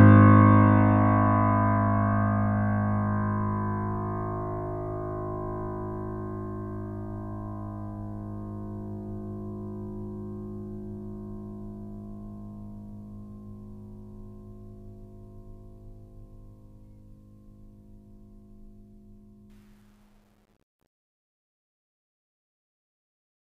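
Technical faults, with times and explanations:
19.50–23.55 s, truncation distortion on a fade: The music fades out from around 19.5 s, but the fade stage keeps too few bits and adds no dither, which fits a 10-bit path. From 20.26 s the tail turns gritty.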